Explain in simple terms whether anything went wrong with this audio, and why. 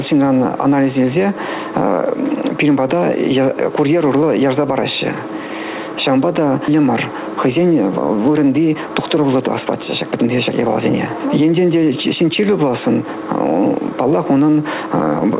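Two things went wrong here. First, there's a skip ahead at about 6.7 seconds. Roughly a second of audio never got played, probably lost in transit or thrown out when the receiver's jitter buffer overflowed while newer audio was already waiting. Playback just jumps forward with no gap, so the sound on either side of that point is stitched together directly and that chunk is simply gone.

Second, from about 8.4 to 12.3 seconds there's a jitter buffer speed-up. The receiver had built up more audio than it wanted, so it kept snipping out tiny pieces, each only one or a few pitch cycles long, to catch up. Altogether roughly a third of a second was trimmed, making that stretch run about 9% faster without the pitch changing, so it comes across as rushed.

All of this went through a phone-style call path with nothing above 4 kHz, which is why the sound is narrow and muffled throughout.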